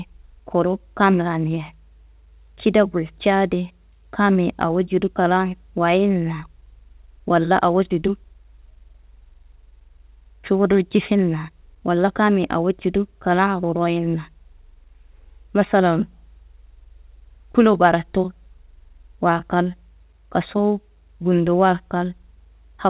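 Speech carried over a call path with nothing above 4 kHz, as expected of a telephone-grade codec such as G.711 A-law; no faults found.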